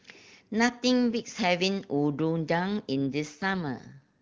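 From 3.12 s to the end at 4.22 s, the speech goes through an AMR rate drop. The codec is pushed to a lower mode, spending fewer bits on the speech itself. Before this point the wideband codec sounds clear. The roughness points to a fall from 23.85 kbit/s to around 8.85 kbit/s. The bandwidth does not narrow and nothing drops out. Instead the speech turns coarse, raspy and more synthetic until the clip ends.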